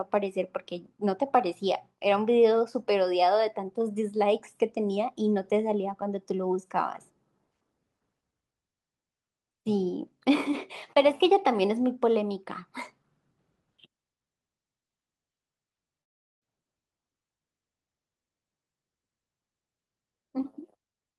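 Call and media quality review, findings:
Long network dropout, 16.01–16.43 s: last sound smeared into a fading buzz, then near-silence. Speech resumes with about 0.4 s lost. Likely packet loss, concealment exhausted.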